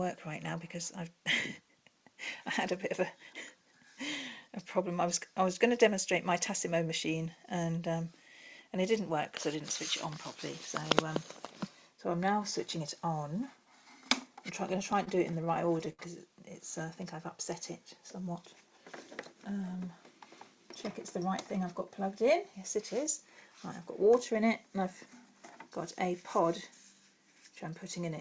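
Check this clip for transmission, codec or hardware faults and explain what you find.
Two jitter-buffer faults are audible, heard through a call path whose content stops sharply at 8 kHz, which fits G.722 wideband coding.

Repeated stalls (stutter), 14.92 to 16.01 s: late packets emptied the buffer nine times. The receiver stretched the last sound, longest 64 ms, so the audio drags. The waveform shows repeated cycles.

Jitter buffer speed-up, 18.2 to 18.79 s: an overfull buffer dropped whole pitch periods, roughly 50 ms, for 108% speed. The audio sounds hurried at unchanged pitch, with the waveform compressed in time.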